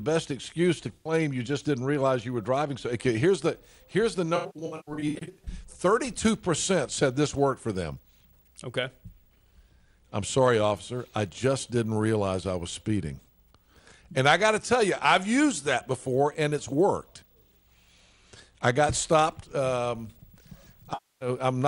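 Three patches of the audio turn smeared, noisy or phasey: 0.95 to 1.13 s, a stretch from 4.36 to 5.49 s broken into repeated short dropouts of around a tenth of a second at most, and 20.93 to 21.29 s. This is AAC frame loss with concealment. The decoder replaced missing frames (about 107 ms, 640 ms and 277 ms of audio) by reusing the last good spectrum with scrambled signs or interpolated energy.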